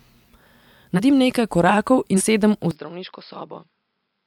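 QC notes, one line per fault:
0.95 to 1.00 s and 2.16 to 2.21 s, compressed frames skipped: whole blocks of the encoded stream never reached the output, either lost from the file or discarded by the decoder as corrupt, so playback leaps forward. The sound lurches ahead by roughly 150 ms at the first point, about three frames of some 46 ms each, and by roughly 100 ms, about two frames, at the second.
2.71 s to end, input switched to a poorer device: capture most likely moved mid-recording onto a lesser microphone or a headset's call mode. From here nothing reaches above 5.3 kHz, so the sound abruptly loses its top end and turns dull and boxy. Level falls by about 10 dB, and a new noise floor sits about 55 dB below the signal. The change happens with no gap at the switch.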